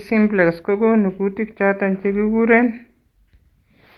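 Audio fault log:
No faults are heard in this speech clip. The sound carries the band-limited character of a WebRTC call path, with content reaching up to around 12 kHz, consistent with Opus coding at a moderate call bitrate.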